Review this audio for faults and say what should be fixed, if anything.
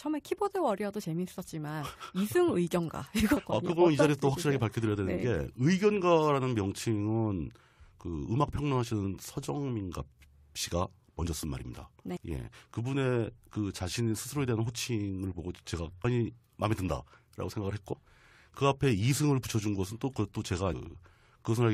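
Brief chirps and blips cut into the speech at 3.36, 12.16, 16.03, 17.92 to 17.94 and 20.72 s. These come from damaged data in the compressed stream: corrupted bytes make the decoder misread frames and lose sync until it finds the next header. Protect the stream with checksums or error correction and verify file integrity after transfer.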